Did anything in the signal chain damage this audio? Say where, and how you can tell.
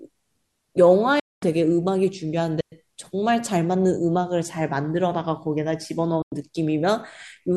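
Yes. The receiver stage of a digital broadcast path shows a digital broadcast dropout twice. From 1.20 to 1.43 s the speech fades out over about 3 ms and stays muted for about 224 ms. From 6.22 to 6.32 s the same thing happens for about 96 ms. Both durations fit whole runs of roughly 32 ms frames being lost or failing their checks. The receiver muted until valid frames arrived again, and the programme material sent during each gap is gone.

A digital wireless dropout sits in the radio link between 2.61 and 2.72 s, a mute of about 115 ms. The audio drops into a clean hole of near silence and comes straight back, with no burst of noise on either side. That is how a digital wireless receiver behaves when too much data is lost over the air. Instead of passing corrupted samples, it ramps to silence very briefly and holds there until the link recovers.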